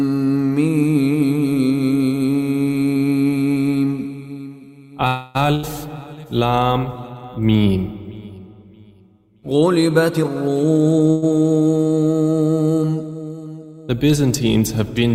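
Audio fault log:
5.07–5.37 s, call audio freeze: the sound stalls into a held buzz or hiss that fades, stretching the moment by about 274 ms, likely because packets were held up and the jitter buffer ran dry. When the audio resumes it picks up exactly where it stopped, so nothing is lost. Unlike packet loss, the sound is only delayed, not skipped.
5.55–5.65 s, burst of packet loss: an 80 ms stretch is filled by the last sound carried on and turned down, a brief fading buzz or hiss. Then the audio jumps ahead, and the 80 ms that should have played is simply gone. The fill looks like a freeze, but here the sound after the gap does not pick up where it stopped, so a short slice of the audio is missing.
10.10–11.08 s, jitter buffer speed-up: the audio plays at about 124% of normal speed, hurried but at unchanged pitch. The receiver is trimming surplus buffered audio by cutting out many short pitch-period pieces in a row, roughly a third of a second in total. 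This differs from a gap fault because there is no held buzz or jump, only a steady rush that shortens the passage.
11.10–11.24 s, call audio freeze: a second, shorter stall of about 120 ms follows right after the rush, again a fading held continuation of the last sound. The audio then resumes from the same point with nothing skipped, which is what separates it from a loss burst.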